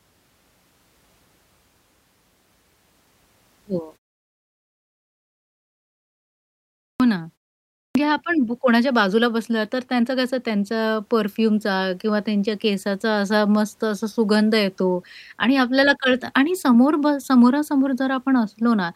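At 6.91 s and again at 7.86 s, speech returns with a clipped start after a pause. The output device idles during silence and needs time to wake. About 89 ms and 92 ms are lost. Each word begins abruptly, missing its opening sounds.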